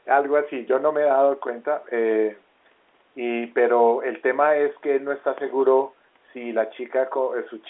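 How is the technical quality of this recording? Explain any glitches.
No glitches can be heard: the speech arrives as an ordinary telephone-line signal, held to roughly the 300 Hz to 3.5 kHz band that G.711 A-law coding at 64 kbps carries, with nothing interrupting or disturbing it.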